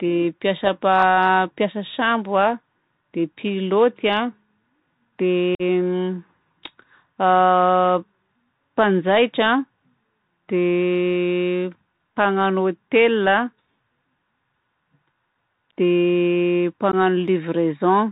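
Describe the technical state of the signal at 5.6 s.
At 5.6 s the speech drops into a short, hard-edged hole from 5.55 to 5.62 s and returns briefly quieter. This is unconcealed Bluetooth headset packet loss: about 45 ms of audio, pointing to a handful of lost voice packets, was replaced by silence or an idle pattern rather than patched over.

Underneath, the Bluetooth CVSD headset codec is plainly audible: a muffled, band-limited sound with nothing above 4 kHz, a granular hiss, and scratchy s sounds. It fits a 64 kbps CVSD link, where one bit per sample steers an adaptive step that loud high content outruns.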